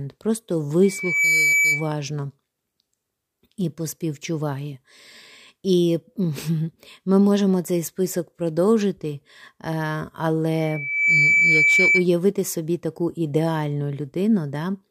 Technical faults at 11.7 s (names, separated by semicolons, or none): loudspeaker feedback squeal